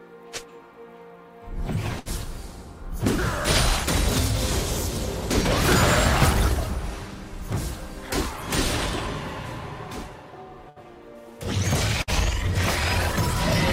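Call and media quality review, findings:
Burst of packet loss at 1.99–2.08 s, 10.69–10.79 s, 12.02–12.10 s. Network drops; receiver concealment extends then fades the last sound for about 60 ms, and about 60 ms of audio is skipped. Spectrogram: smeared, decaying band, then an abrupt content jump.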